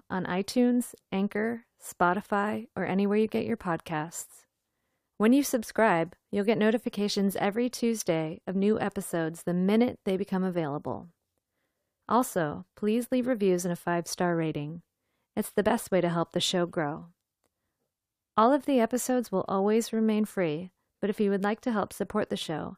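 Speech recording with no audible technical faults.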